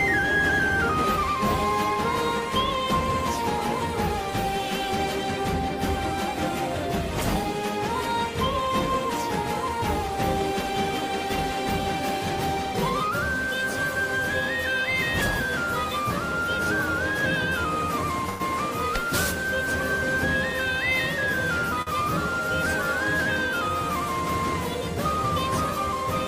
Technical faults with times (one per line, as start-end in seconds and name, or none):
18.29-18.42 call audio freeze
21.82-21.89 short stall from a late packet